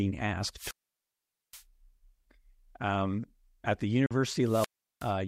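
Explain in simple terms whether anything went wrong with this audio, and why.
Two kinds of fault are audible in this speech clip.

The first is a wireless microphone squelch dropout, which happens twice. From 0.53 s to 1.64 s, and again from 4.41 s to 5.15 s, the radio signal weakens, hiss rises, and the receiver mutes the output. The resulting silent holes last about 0.82 s and 0.37 s.

The second is a short gap at 4.06 s, lasting about 43 ms. The sound cuts out abruptly and then carries on as if it had kept playing. This is likely a Bluetooth dropout, where packets arrived too late and were thrown away, which fits roughly two lost packets.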